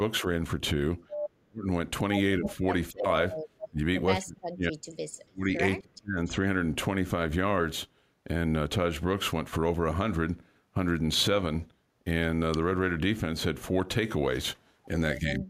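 Speech suppressed in double talk, 1.39 to 1.7 s: the speech drops by about 40 dB for roughly 0.3 s, likely because an echo canceller could not separate its own talker from the loudspeaker echo of simultaneous far-end talk.

Speech suppressed in double talk, 2.38 to 3.06 s: the level dips by about 20 dB in fragments totalling around 0.3 s, likely from the same overlapping-talk suppression.

Echo leak, 2.44 to 2.53 s: a delayed copy of the speech, 276 ms behind, sits only about 5 dB below it, likely residual loudspeaker pickup the canceller failed to remove.

Echo leak, 3.58 to 3.68 s: a 280 ms delayed scrap returns about 10 dB below the speech, likely the same incompletely cancelled acoustic echo.

Speech suppressed in double talk, 3.68 to 6.38 s: the speech repeatedly ducks or cuts out by up to about 35 dB, roughly 1.5 s in total, likely the canceller attenuating during double talk.

Echo leak, 5.12 to 5.21 s: a faint copy delayed 285 ms sits about 35 dB down, likely a residual of that same echo path.

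Speech suppressed in double talk, 15.2 s to the end: the speech drops by about 20 dB, likely suppression triggered by far-end talk.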